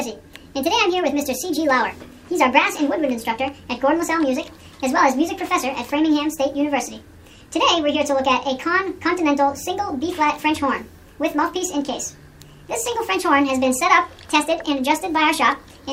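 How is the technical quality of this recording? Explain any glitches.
The recording has one fault, present from start to finish. Wrong sample rate, throughout: the audio plays 1.5 times too fast without conversion, which fits 32 kHz material played at 48 kHz, so everything sounds hurried and about 7 semitones high.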